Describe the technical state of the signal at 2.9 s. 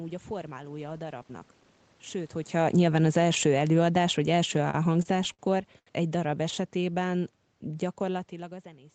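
At 2.9 s the speech is caught in automatic gain falling, which runs from 2.52 s to 7.36 s. The gain control judged the input too loud, or its background noise too strong, and is easing its gain down gradually, by about 10 dB over that span, so the level sinks steadily rather than stepping. What separates this from a talker leaning away from the microphone is that the room noise drops along with the voice, since the whole signal is being turned down, not just the talker.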